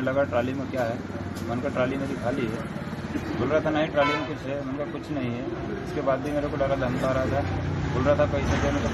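No technical faults can be heard anywhere in the audio.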